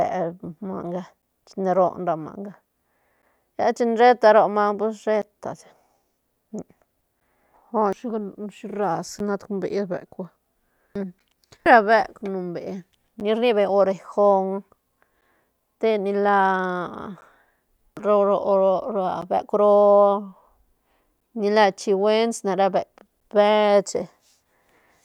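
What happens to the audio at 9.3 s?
Periodic USB or driver dropouts: a bus or driver stall every 2.0 s, from 1.22 to 23.21 s, silences roughly 10 ms, heard as regular ticks.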